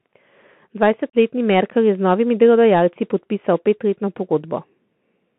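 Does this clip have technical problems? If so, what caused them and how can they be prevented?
Yes. The whole recording sounds narrow, telephone-like and slightly dull, with a short gap near the start.

The speech is boxed into roughly 150 Hz to 3.4 kHz, with scratchy sibilants and a grainy hiss beneath it. This is the Bluetooth CVSD headset codec, which fits a 64 kbps link. It tracks the waveform one bit at a time with an adaptive step, so fast, loud high-frequency detail outruns the step and turns rough. Prevent it by using a wideband (mSBC or LC3) headset mode or a wired microphone.

There is also a faint hollow dullness at the top of that band. This comes from channel delay (comb filtering): one channel arrives a tiny fraction of a millisecond late, roughly four samples. When the channels are summed to mono, that delay puts the first notch around 7 kHz, above the codec's range, so only its gentle downward slope reaches the audible band. 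Prevent it by keeping channels sample-aligned or recording a single channel.

From 1.10 to 1.15 s the speech drops out abruptly for about 37.5 ms, with hard edges. This is unconcealed Bluetooth headset packet loss, consistent with about five voice packets vanishing between headset and phone and being replaced by silence. Prevent it by reducing radio interference and distance, or by using a link with packet loss concealment.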